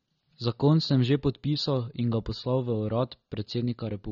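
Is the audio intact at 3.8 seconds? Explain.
No. At 3.8 seconds the speech carries the same AAC compression damage heard throughout the clip: nothing survives above 6.9 kHz, so the top end is gone and the sound is dull, with a smeared, warbling texture on sustained sounds and sibilants. The likely cause is AAC-LC coding at a low bitrate, around 24 kbps by the sound of it. That starves the encoder of bits, forcing a lower cut-off and coarser quantisation.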